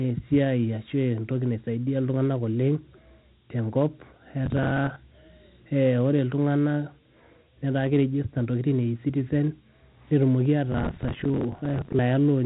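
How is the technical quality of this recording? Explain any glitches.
The recording has clear technical problems: low-grade phone-system coding throughout, plus two bursts of crackle.

Dialogic VOX ADPCM: the whole clip went through 4-bit telephone ADPCM coding, which fits 32 kbps at 8,000 samples a second. Nothing survives above about 3.9 kHz, and a gritty hiss trails the speech.

Processor overload crackle: from 4.46 to 4.96 s and again from 10.72 to 11.99 s, the processor missed deadline after deadline on buffers of roughly 10 ms. Each miss repeated a scrap of old audio with hard edges, so the speech tears into crackle until the load eases.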